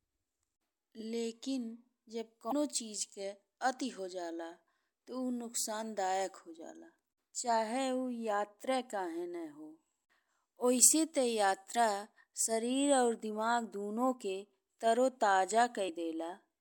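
Damaged data in the compressed speech stream causes brief glitches at 2.49–2.53 s, 7.05–7.07 s and 15.85–15.89 s. Corrupted frames make the decoder lose sync.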